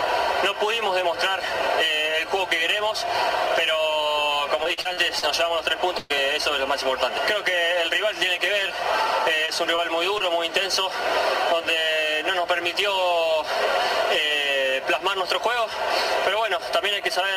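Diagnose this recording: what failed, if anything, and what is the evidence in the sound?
From 4.63 to 5.24 s the sound turns choppy and robotic, with five brief holes, the longest about 41 ms. This is repeated packet loss on the network. Each gap is patched by extending the last sound, so roughly a quarter of that stretch is synthetic fill.

At 5.98 to 6.12 s a single burst of packet loss takes out about 120 ms. The receiver stretches the last sound and fades it, so it comes out as a held smear. Playback then resumes further on, and the audio in between is gone.

Three brief smears or wobbles fall at 9.46 to 9.50 s, 9.76 to 9.80 s and 10.18 to 10.22 s. Each is short concealed packet loss of about 20 ms. The decoder continues the preceding sound through each hole, then blends back into the real signal.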